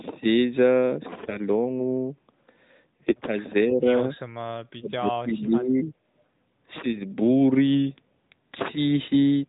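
From 1.22 to 1.38 s the speech breaks into a brief hoarse, gargly scratch. These are AMR bit errors. A handful of frames arrived with flipped bits in their less protected fields, at a rate of roughly a few percent. The decoder still accepted them. So the excitation pulses landed in the wrong places, and the fine pitch, gain and spectral values went astray. Pitch and loudness hold roughly steady while the texture turns rough.

From 3.65 to 3.90 s the voice dips by around 10 dB for about a fifth of a second. This is speech suppressed in double talk, most likely because the far end spoke at the same moment. The echo canceller could not tell the talker from the returning loudspeaker sound. It turned everything down together.

At 4.27 to 4.32 s a faint scrap of earlier speech returns, very quiet, roughly 35 dB under the main voice. It trails the original by 367 ms. This is echo leak, likely from a loudspeaker at the other end whose canceller let a little of the pickup through. 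The scrap is short.

From 4.76 to 5.88 s a longer double talk suppression follows. The speech sinks by up to about 25 dB for roughly a second. The narrowband band limit stays audible throughout, with nothing above 4 kHz, which fits AMR-NB at 12.2 kbps.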